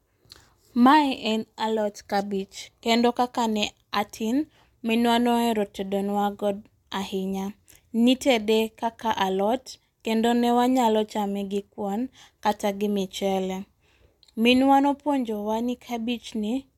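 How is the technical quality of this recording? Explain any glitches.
The technical quality of this recording is good, and there are no glitches to explain.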